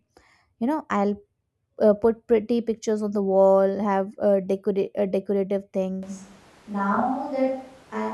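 At 6.03 s the speech turns abruptly roomy and thin until the end, a few dB quieter with more background noise, likely a switch to a distant microphone.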